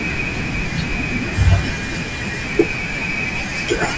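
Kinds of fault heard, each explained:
Resampler restarted on every block: from 1.8 s onward, each 50 ms block was rate-converted in isolation, without its neighbouring samples, leaving an error at every block edge. This is heard as a 20 Hz ticking buzz riding on the speech, matching the 50 ms block rate of a 44.1 kHz to 16 kHz conversion.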